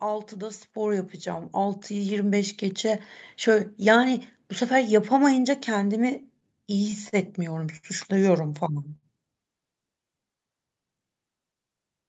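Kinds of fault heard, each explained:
Automatic gain rising: From 0.05 to 2.96 s the speech and the background swell together by about 10 dB, a slow climb rather than a jump. The automatic gain control judged the input too quiet and kept raising its gain until the level settled.
Repeated stalls (stutter): Between 6.23 and 7.16 s the speech drags and hitches five times, about 82 ms held in all, the longest hold 42 ms, with nothing lost. Packets kept arriving late, so the jitter buffer repeatedly emptied and the receiver stretched the last sound each time.
Short stall from a late packet: At 7.77 s and again at 8.96 s a sound hangs on too long, for about 64 ms and 67 ms, then the speech resumes where it left off. Each time one packet arrived late, and the receiver extended the previous sound until it came.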